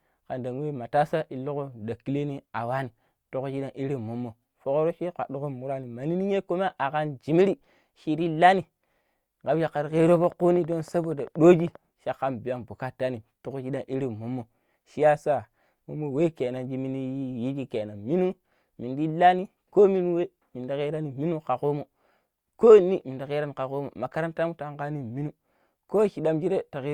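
From 10.00 to 11.76 s a train of clicks runs over the speech: about twenty sharp, near-identical ticks at a steady 12.6 per second, peaking at roughly the level of the speech and heard in the gaps too. The likely cause is electrical interference or a faulty connection or power supply injecting pulses. On a spectrogram they appear as evenly spaced thin vertical broadband lines; on the waveform, as regularly spaced narrow spikes.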